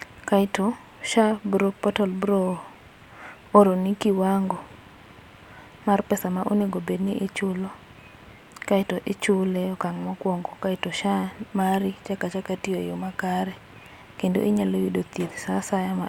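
A speech clip with one fault. At 2.54 s there is a single sharp click. It sounds like dropped samples. A handful of samples, well under a millisecond, are likely missing from the stream. The waveform jumps straight from one value to a later one. That sudden step makes the click. The gap is far too short to remove any sound. In a spectrogram it would show as a thin vertical line.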